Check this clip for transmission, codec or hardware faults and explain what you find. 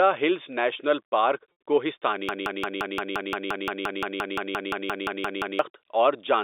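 Two transmission faults are audible in this speech, heard through a telephone-band G.711 line limited to roughly 300 Hz to 3.7 kHz.

Packet loss with pitch repetition occurs from 1.52 to 1.58 s, just after "ہلز نیشنل پارک". About 60 ms of audio is missing, which fits three 20 ms packets. The receiver filled the gap by repeating the last pitch period, so the voice briefly holds on a buzzy, slightly frozen tone instead of dropping out. That sustained buzz is what separates it from a plain dropout, which would go silent or click.

A broken-record loop runs from 2.29 to 5.59 s. A fragment of about 174 ms plays back to back, identically, about 19 times, and the speech that should have filled those three seconds never arrives. The likely cause is a stalled stream or player that kept resending the last buffer it held. Unlike concealment, the repeated piece does not fade or change. It repeats exactly, with the same stutter each time, until normal audio resumes.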